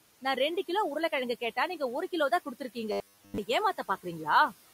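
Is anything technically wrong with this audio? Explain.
Yes, there are two faults in this speech clip.

Noise suppressor artifacts run throughout. The suppressor pulls down frequency bands it judges to be steady noise by about 15 dB, frame by frame, so the room noise, sitting about 20 dB below the speech, dips in the gaps and swells back under the voice.

Robotic sound from repeated short buffers appears from 2.92 to 3.39 s. The audio is likely arriving too seldom, with the gap filled by looping the last fragment while most of the real audio in that stretch is lost. The repeats impose a rigid 100 Hz metallic buzz, which fits a 10 ms buffer.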